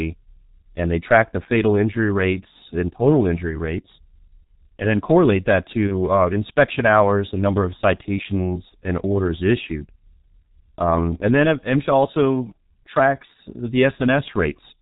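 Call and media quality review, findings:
G.723.1 codec, throughout. Speech muffled and hoarse, nothing above 4 kHz, consonants smeared, heavy coding damage. Low-rate codec at a sound consistent with 6.3 kbit/s. Component: speech codec on the media path.

Mechanism: long 30 ms frames and a slowly updated vocal model cannot follow fast articulation, so transients blur and the voice takes on a rough, hoarse texture.

VoIP packet loss concealed by the speech codec, 5.87–5.93 s. Brief stretched, flattened sound that dips in level, then recovers. Consistent with one lost 30 ms frame. Component: jitter buffer / decoder concealment.

Same fault, 8.69–8.75 s. Another short smear and fade, again fitting a single 30 ms gap.

Mechanism: decoder repeats last pitch and filter state with falling gain; dependent frames keep the voice weak briefly after packets resume.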